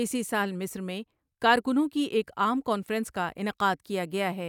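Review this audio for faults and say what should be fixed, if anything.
Nothing needs to be fixed, since no faults turn up when reviewing this speech audio.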